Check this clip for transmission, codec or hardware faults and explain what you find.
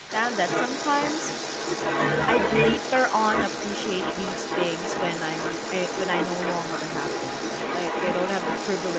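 One fault runs through the whole clip, alongside the normal 8 kHz upper limit of a wideband Opus call path.

Other side's voice leaking through, from 0 to 8.99 s: a second voice sits behind the main speech for the entire clip, only about 5 dB quieter, so it competes closely rather than fading into the background. This is likely residual echo: the far party's audio played from the loudspeaker reached the microphone, and the echo canceller failed to subtract it.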